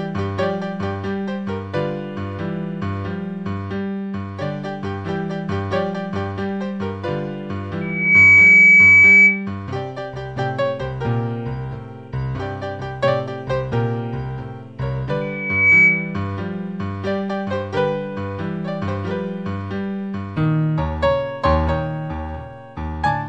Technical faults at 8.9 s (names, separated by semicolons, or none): loudspeaker feedback squeal